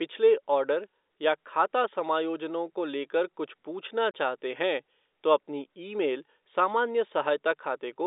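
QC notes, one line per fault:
4.11–4.14 s, packet loss filled with silence: the speech cuts to a 30 ms dead gap, with hard edges where the waveform stops and restarts abruptly. The length fits one lost packet that was replaced by plain silence rather than concealed.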